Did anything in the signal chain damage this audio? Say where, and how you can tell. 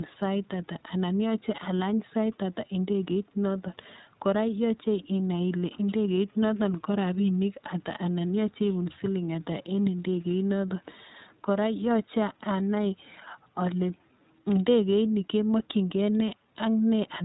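Yes, the codec stage. The iLBC codec is plainly audible through the whole speech clip: nothing above 4 kHz survives, and the speech has a rough, slightly synthetic edge. Each 20 ms frame's excitation is coded on its own, and the coarseness fits the 15.2 kbps mode.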